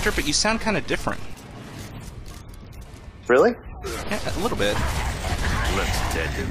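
No dropouts, clicks, distortion or other technical faults can be heard anywhere in the audio.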